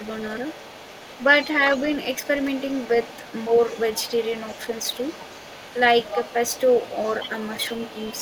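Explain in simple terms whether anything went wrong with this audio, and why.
A second, fainter voice sits quietly underneath the speech from the start to 1.49 seconds, then again from 1.72 seconds to the end, a little stronger the second time. This is the other side's voice leaking through, likely because the talker's loudspeaker echo wasn't fully removed from the microphone.

Around 7.28 to 7.33 seconds, the speech briefly and slightly dips for a split second. This is speech suppressed in double talk: with both sides talking together, the echo canceller likely turned everything down rather than letting the talker through.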